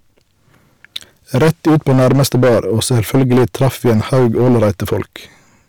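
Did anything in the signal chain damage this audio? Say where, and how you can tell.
Yes: hard clipping throughout, from overdriving a converter or number-format stage by about 14 dB. Around a tenth of samples were pushed past the limit, giving flat-topped waveform peaks and harsh high-frequency smearing on spectrograms.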